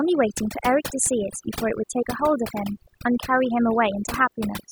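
From start to finish the speech carries overdone noise removal: a noise reduction stage was pushed too hard, cutting any frequency band that sits near its noise estimate, so the quieter parts of the voice are removed along with the noise. The background falls to near silence sprinkled with twinkling specks. A spectrogram shows scattered isolated dots between syllables and ragged, holed harmonics, while the waveform sits almost flat in the pauses.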